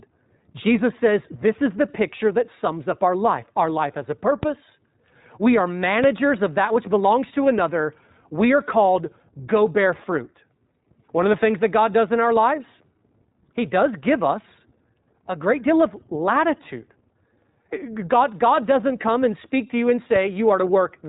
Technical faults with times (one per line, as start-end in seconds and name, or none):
0.00-21.09 iLBC codec
4.43 DC step
6.04 DC step
20.16 DC step